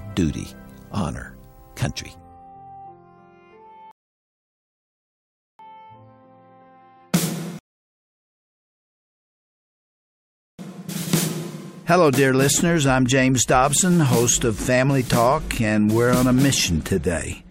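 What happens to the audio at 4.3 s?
At 4.3 s you're inside a rebuffering stall, 3.91 to 5.59 s: the player ran dry, went silent for about 1.68 s, then picked up exactly where it stopped.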